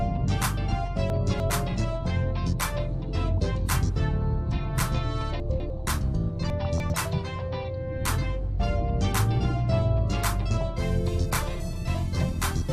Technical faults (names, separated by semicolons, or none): chunks out of order